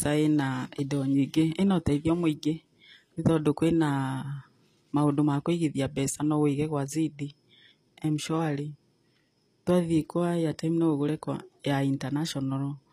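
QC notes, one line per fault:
Throughout, likely HE-AAC compression: the treble is bright but synthetic, with s sounds turning gritty and lispy and nothing at all above about 14.9 kHz. The codec appears to carry only the lower spectrum in full and rebuild the highs by copying lower bands upward under a coarse envelope, so the upper harmonics of the speech no longer line up with those below the crossover. The plainly audible damage fits a low bitrate near 24 kbps.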